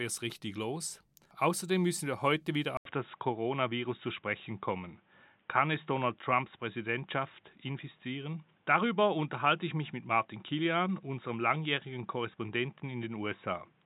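At 2.77 s the recording likely switched its input to a poorer device, such as another microphone or a headset's call profile. After a brief gap of about 80 ms, the speech continues to the end with nothing above 3.8 kHz, so it sounds dull and boxy where it was open before. A faint new background noise sits well beneath the speech, while the loudness stays much the same across the switch.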